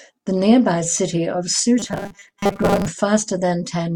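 Robotic sound from repeated short buffers, 1.79–2.88 s: speech turns into a rigid 200 Hz buzz, fitting 5 ms fragments likely looped over about half the audio.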